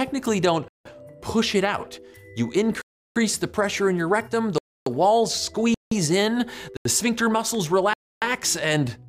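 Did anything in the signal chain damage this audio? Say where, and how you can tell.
Yes. The sound cuts to dead silence and snaps back at 0.68, 2.82, 4.58, 5.74, 6.77 and 7.94 s, holes lasting 85 to 340 ms. These blocks of digital silence point to buffer underruns in the driver, with several gaps fitting multiples of a 4096-sample buffer.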